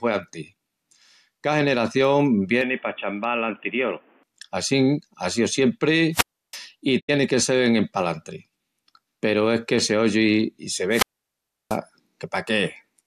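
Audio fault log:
2.61 to 4.23 s, input switched to a poorer device: with no gap at the switch, the sound abruptly narrows and turns boxy, with nothing audible above 3.4 kHz. The level drops by roughly 5 dB and a new noise floor appears, around 30 dB under the signal. This is likely a change of input to a band-limited device such as a headset's call profile, which carries its own tone and background noise. Full bandwidth returns just before "assín á síu".
6.12 to 6.58 s and 10.90 to 11.79 s, wireless microphone squelch dropout: in each case hiss and static swell briefly, the output drops to near silence, and the signal comes back. The muted holes last about 326 ms and 686 ms. The analogue FM link faded below the receiver's squelch threshold, so the receiver shut its output off instead of passing the noise through, and it reopened once the carrier recovered.
6.99 to 7.10 s, digital broadcast dropout: the sound fades quickly, over about 20 ms, into a clean silent gap about 72 ms long, then resumes. 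The length of the gap fits a few lost or corrupted frames. With no valid data to decode, the receiver muted itself until good frames arrived again. The audio that was sent during the gap is gone and not recovered, and unlike the squelch events there is no hiss around the gap.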